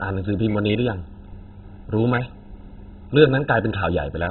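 Throughout the speech, the likely cause is MP2 compression starved of bits, at a rate that points to about 16 kbps. Upper sub-bands are switched off, leaving nothing above 4 kHz, and the remaining bands are coarsely quantised, giving dull, muffled audio with heavy gurgling, granular distortion.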